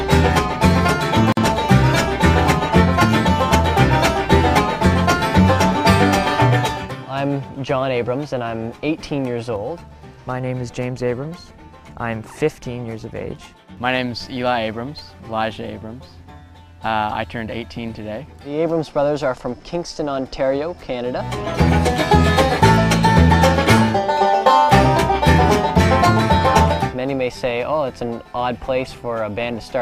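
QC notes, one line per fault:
1.32–1.37 s, gap at a join of encoded pieces: a 48 ms gap with smeared edges, where encoder delay and end padding from separately encoded pieces were never trimmed.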